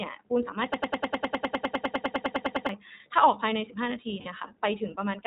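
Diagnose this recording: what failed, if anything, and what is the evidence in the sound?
The codec stage narrowed and coarsened the whole recording. This is iLBC coding. Nothing above 4 kHz survives, so the speech sounds dull and narrowband. Throughout, it has a plainly audible rough, slightly synthetic edge. That comes from each short frame's excitation being coded on its own rather than built from the previous one, which fits iLBC at its 15.2 kbps, 20 ms frame mode.

From 0.74 to 2.69 s there is a broken-record loop. A fragment about 101 ms long plays back to back, identical each time, for nearly two seconds, roughly nineteen repetitions. The likely cause is a stall in the player, encoder or stream buffer, which kept resending the last chunk it held. Whatever should have played during those two seconds is gone, replaced by this mechanical stutter.

The network stage dropped audio around 4.20 to 4.27 s, and these are lost iLBC frames. 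For about 60 ms, which fits three consecutive 20 ms frames, the decoder's concealment fills the hole. It repeats the last pitch cycle blended with noise, giving a brief held, buzzy vowel-like sound. Because iLBC frames decode independently, the speech snaps back to normal immediately after the gap.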